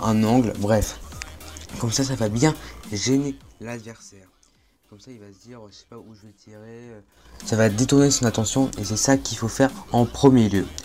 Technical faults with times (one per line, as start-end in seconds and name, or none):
2.90-4.18 zipper noise